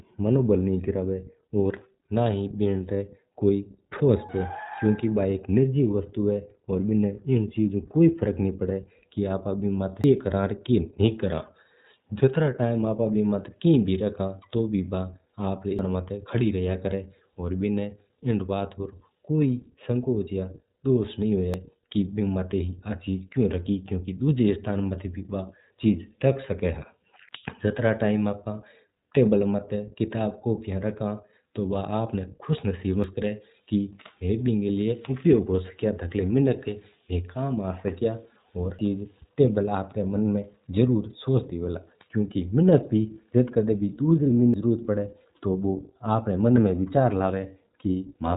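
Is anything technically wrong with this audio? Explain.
Yes, two faults. iLBC codec throughout: each 20 ms frame is coded independently and nothing above 3.8 kHz passes, so the speech sounds plainly rough, synthetic and dulled.

Audio missing between chunks at 4.29, 10.04, 15.79, 21.54, 27.29, 33.04, 38.79 and 44.54 s: about a third of a second vanishes each time, with the edges spliced together. The likely cause is material dropped at 6 s chunk boundaries.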